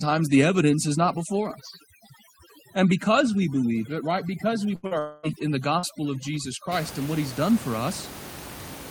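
From the start to about 6.72 s, just before "and what he's done", there is overdone noise removal. A noise reducer was pushed too hard against the room noise, which sits about 14 dB below the speech. Bands close to its noise estimate are cut deep or dropped. The background drops and breaks up into twinkling specks. Quiet parts of the speech are stripped away too.

At 4.75 to 4.86 s comes a burst of packet loss. About 80 ms of audio never arrived in time. The receiver held the last sound for roughly 75 ms and faded it. It comes across as a brief held buzz or fading hiss. The speech then picks up further on, with that stretch gone.

Right after, from 4.87 to 4.94 s, there is a short concealed packet loss. About 40 ms went missing. The decoder bridged it by extending the previous sound, then blended back. It is heard as a quick smear or wobble, and a short consonant may be lost.

From 4.99 to 5.26 s the sound is replaced by a continued buzz or hiss that fades but never reaches silence. 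This is likely a long network dropout, with about 240 ms of real audio lost and the whole gap filled by concealment. The speech resumes past the missing part.

At 5.79 to 5.86 s there is a second short concealed packet loss. Again about 40 ms was patched with an extension of the preceding sound. It leaves a brief wobble or smear before the real audio returns.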